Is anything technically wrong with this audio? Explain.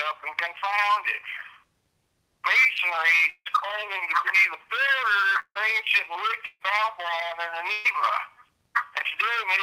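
Yes. There are three gaps from a likely long network dropout, at 3.29 to 3.47 s, 5.39 to 5.57 s and 6.45 to 6.62 s. In each, about 160 ms of audio never arrived. The receiver filled most of the gap by extending the last sound as a fading buzz or hiss, then ran out and left 40 ms, 60 ms and 20 ms of silence respectively. The sound then resumes further on, without the lost part.

A burst of packet loss follows at 7.72 to 7.87 s. Here about 120 ms went missing, lost or arriving too late to play. Concealment covered the whole gap, stretching the preceding sound and turning it down with no silent stretch. The result is a brief held, fading smear, after which the audio picks up beyond the skipped portion.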